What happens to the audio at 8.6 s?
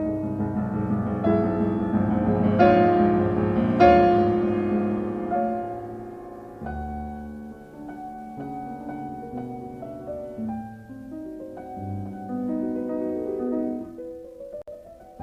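Nothing goes wrong at 8.6 s; the audio runs on intact through that moment.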